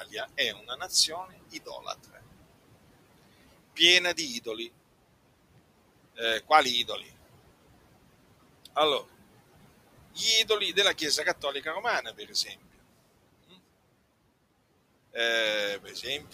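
From the start, the background noise pumps: it sinks in the pauses and swells back under each phrase. These are noise suppressor artifacts. The suppressor pulls down every band it judges to be steady noise, frame by frame, by about 18 dB here, so the room noise, which sits about 18 dB below the speech, keeps appearing and vanishing with the voice.

Three short moments sound swallowed, as if part of a syllable faded out. This is speech cut by the noise suppressor, which mistook quiet parts of the speech for background noise and turned them down with it. The first is between 0.54 and 0.81 s, with a drop of about 10 dB over roughly a sixth of a second. The second is between 1.51 and 1.87 s, dipping by about 8 dB for around a tenth of a second. The third is between 12.03 and 12.47 s. It is the deepest, at about 12 dB, and again lasts roughly a sixth of a second.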